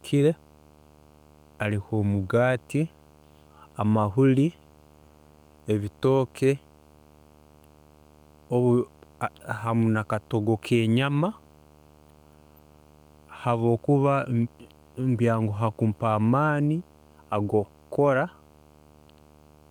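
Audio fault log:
throughout, video or display buzz: a steady 75 Hz buzz with a fizzy hash above it sits roughly 30 dB under the speech, as a screen or its video cable leaks its field-rate pulses into the audio line, so every refresh of the picture becomes part of the sound.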